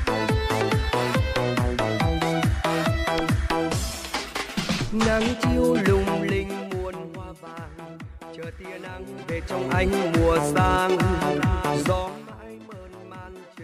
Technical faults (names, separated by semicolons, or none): zipper noise